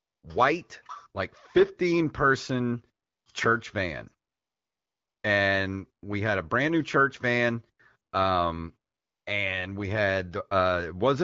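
AMR comfort noise fills four pauses: 0 to 0.23 s, 3.05 to 3.25 s, 4.29 to 5.23 s, and 8.91 to 9.25 s. The phone judged the talker silent and stopped sending speech frames. The receiver substituted a steady, smooth synthetic hiss that switches abruptly in and out.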